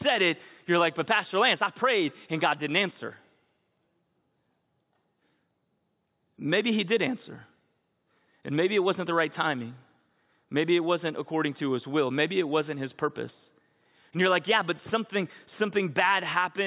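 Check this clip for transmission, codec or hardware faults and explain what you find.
No faults found in this recording.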